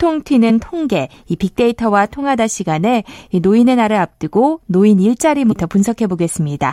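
At 0.49 to 0.51 s and again at 5.51 to 5.53 s, damaged data in the compressed stream makes the decoder misread corrupted frames and lose sync, producing a brief chirp or squawk.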